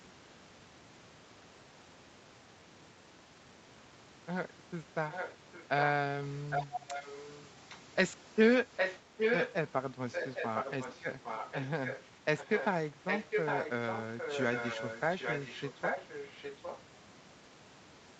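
From 5.1 to 5.83 s, 6.5 to 7.77 s, 8.76 to 9.53 s, 10.12 to 12.02 s, 12.37 to 12.67 s and 13.06 to 16.81 s, an echo leak returns the speech about 0.81 s late, about 5 dB quieter than the original and as loud at 8.76 s, likely from incomplete echo cancellation.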